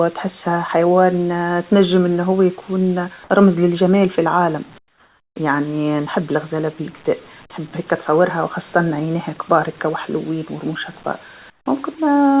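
Speech carried over a call path whose band stops at 4 kHz, as a narrowband telephone codec would, shows comfort noise in place of the background twice: from 4.78 to 5.36 s and from 11.5 to 11.66 s. The sender likely stopped transmitting during detected pauses, leaving the receiver to synthesize filler noise. For those 580 ms and 160 ms, the real room tone gives way to a flat, featureless hiss, about 15 dB and about 18 dB quieter respectively.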